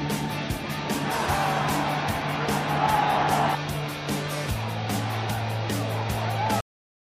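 At 6.61 s the audio hits a cut-off end. The sound stops mid-event, with no decay or fade. The final buffers never reached the output. From 6.61 s to the end there is only flat digital silence, lasting about half a second.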